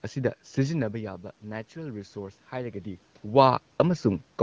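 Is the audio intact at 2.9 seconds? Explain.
No. At 2.9 seconds the speech and the room noise behind it are still swelling together, the last part of a slow automatic gain rise that runs from about 0.87 to 3.13 seconds. The level at the microphone had fallen by about 12 dB, so the gain control judged the input too quiet and raised its gain by about 4 dB over those two-plus seconds, lifting the background along with the speech.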